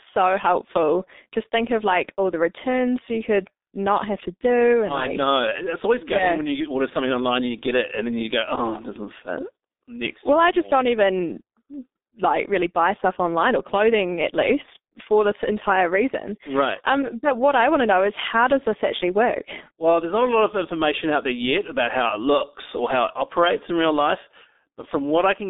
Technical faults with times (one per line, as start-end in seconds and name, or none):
0.00-25.49 G.723.1 codec